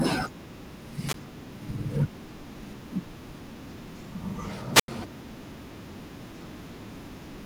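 Two wireless microphone squelch dropouts occur, at 1.07–1.14 s and 4.73–4.88 s. Each time the radio signal fades, hiss rises, and the receiver's squelch mutes the output, leaving a gap of near silence of about 14 ms and 87 ms before the speech returns.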